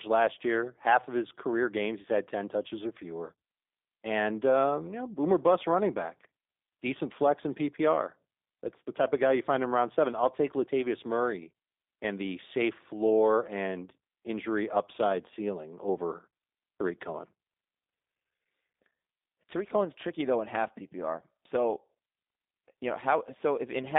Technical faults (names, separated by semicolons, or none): G.729 codec